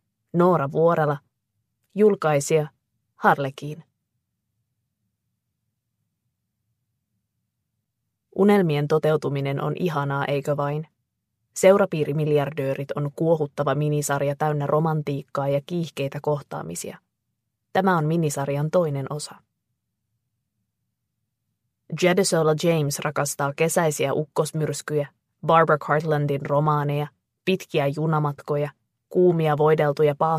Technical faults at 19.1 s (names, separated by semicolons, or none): none